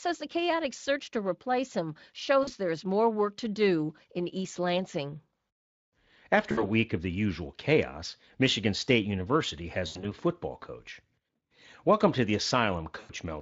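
VoIP packet loss concealed by the speech codec occurs at 2.43 s, 6.51 s, 9.87 s and 12.99 s, with gaps of about 40, 60, 100 and 100 ms. The third is broken up over 160 ms, with the longest run 80 ms. Through the light Speex coding, each gap is filled by the decoder repeating its last pitch and filter at falling gain. The speech smears into a fading buzzy tone or coloured noise and stays weak briefly afterward.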